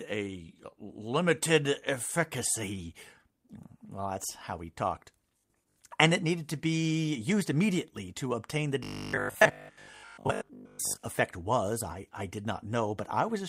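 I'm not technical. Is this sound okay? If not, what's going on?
No. At 5.38 to 5.76 s, after "that's how he talked", and 8.83 to 11.05 s, after "immediately to obtain the", the voice becomes a metallic 50 Hz buzz: robotic sound from repeated short buffers, likely audio arriving late and 20 ms pieces being repeated.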